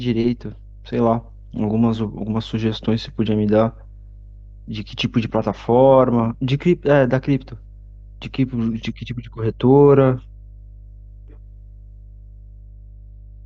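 Mains hum sits under the speech the whole way through, a steady 50 Hz drone about 25 dB down, the kind a ground loop or nearby transformer leaks in.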